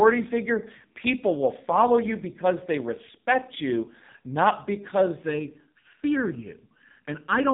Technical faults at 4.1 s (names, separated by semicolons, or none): AMR narrowband mobile codec